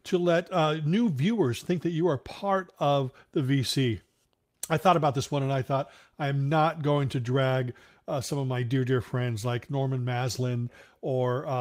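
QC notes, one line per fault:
No faults detected on this pass; nothing to log.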